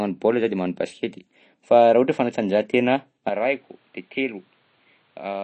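From the start, the speech has a watery, swirling quality. Sibilants turn metallic and chirpy, and consonant attacks smear. Nothing is heard above 8.3 kHz. The damage is plainly audible. This points to MP3 compression, likely at a low rate that fits about 32 kbps. Short of bits, the encoder drops the treble at a fixed point and discards weak frequency lines. Those lines flicker on and off between frames, which causes the swirl.

At 3.29 s the sound abruptly turns dull and boxy, and it stays that way to the end. There is no gap at the change. The top of the band now stops at 4.6 kHz. The level falls by about 10 dB. A new noise floor appears, roughly 35 dB under the speech. This matches an input switched to a poorer device, likely a lesser microphone or a headset call profile. That device passes a narrower band, with its own tone, level and hiss.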